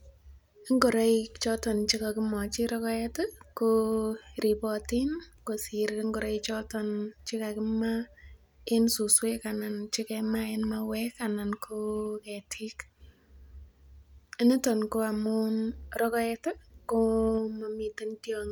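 No audible technical faults are present at any point in the speech.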